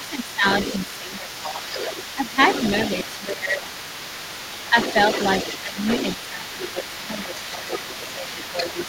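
From the very start and right through to the end, the other side's voice is leaking through underneath, sitting roughly 10 dB below the talker. The likely cause is the echo canceller not fully stripping the loudspeaker playback out of the microphone, so that second voice rides along the whole time.

Alongside that, there's speech suppressed in double talk at 0.0–0.44, 0.85–1.67, 2.15–2.37, 3.24–3.7, 4.7–4.75, 5.62–5.82 and 6.3–8.86 s. The talker dips by around 10 dB in most of these, closer to 15 dB at 3.24 s and only slightly at 4.7 s, likely because the canceller couldn't tell them from the echo and ducked everything.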